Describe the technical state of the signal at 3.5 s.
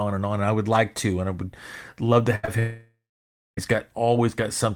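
At 3.5 s the signal is inside a long network dropout from 2.59 to 3.59 s, likely caused by packets ceasing to arrive. The receiver stretched the last sound into a fading buzz, then left about 0.59 s of silence. Speech returns at 3.59 s without the missing second.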